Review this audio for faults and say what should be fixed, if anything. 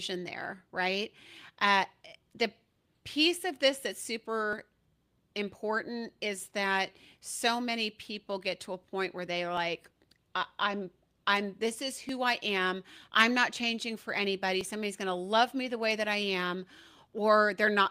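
There's a regular click every 2.52 s from 2.02 to 17.13 s, likely clock drift buffer slips: the clocks mismatch by roughly 500 ppm, so roughly 70 samples get dropped or repeated. Lock both devices to one shared word clock, or resample asynchronously.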